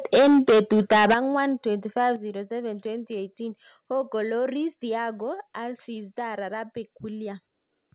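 From 0.14 s to 1.4 s the speech is in heavy microphone overload. Peaks push about 11 dB past the converter's ceiling, and roughly a fifth of the waveform is flattened. The loudest syllables take on a harsh, crackling edge, likely because the input volume was set too high. A second, much lighter overload at 2.0 to 2.07 s only grazes the limit, leaving a brief roughness. Unlike a level change, overload alters the sound's texture without making it quieter.

The microphone volume is stepped down four times, likely by the call software reacting to that clipping. The steps fall at 0.15 s (about 3 dB), 1.14 s (about 9 dB), 2.16 s (about 6 dB) and 5.22 s (about 2 dB). Each is an instant drop in both speech and background with no added distortion, which sets it apart from overload. The 1.14 s and 2.16 s steps follow distorted peaks closely. All of this sits inside the narrowband call path, which carries nothing above 4 kHz.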